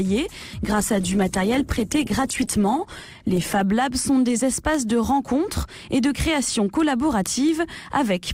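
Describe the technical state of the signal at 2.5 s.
At 2.5 s the signal is inside a call bitrate drop that runs from 0.69 s to 3.73 s. The connection's bandwidth estimate fell, so the encoder was told to spend far fewer bits and coded the audio much more coarsely, shedding the upper frequencies. The sound turns muffled and rough, which fits a fall from about 96 kbps to roughly 15 kbps, held at its lowest for 2.94 s before recovering.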